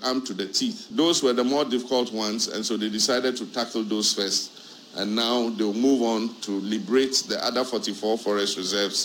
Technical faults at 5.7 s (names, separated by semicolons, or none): sample clock jitter